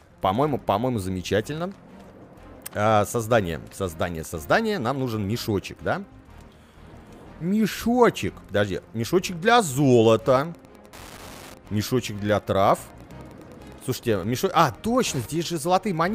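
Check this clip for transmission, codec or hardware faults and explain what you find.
One hardware fault is present: Wi-Fi interference from 10.42 s to 16.15 s. The audio circuit rectifies a nearby Wi-Fi radio's beacon, which repeats every 102.4 ms. This produces a steady ticking about ten times a second, roughly 25 dB below the sound.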